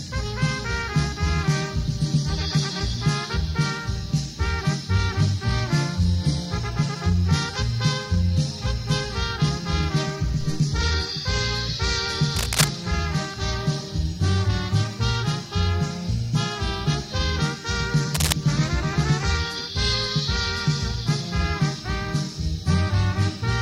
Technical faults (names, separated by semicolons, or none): cable scratch noise